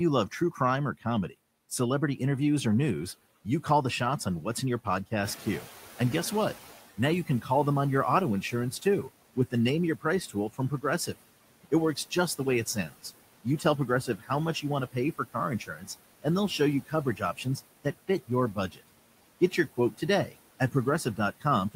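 Across the whole clip the noise suppressor artifacts are audible: the background is pulled down by about 17 dB, sinking in the gaps and lifting under speech. Unlike the isolated cuts below, this pumping is constant and touches the noise, not the speech.

Speech cut by the noise suppressor first appears from 0.31 to 1.32 s. Roughly a tenth of a second of speech is dipped by up to about 12 dB, so it sounds swallowed. Because the speech itself drops, this differs from the background pumping.

At about 5.0 s the room noise, which is part of the recording, rises by roughly 10 dB. From 5.24 to 6.82 s the noise suppressor is catching up. The louder noise first passes with too little reduction, then settles over about 1.58 s to a cut of about 12 dB. This gradual fade after a jump sets it apart from a steady room-noise change.

The speech cuts return from 6.97 to 7.49 s, with about 10 dB lost over roughly a tenth of a second. 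Across 8.42 to 18.89 s they are heaviest, dropping as much as about 18 dB and totalling around two seconds of swallowed, faint speech. From 19.51 s to the end they continue with drops of up to about 15 dB.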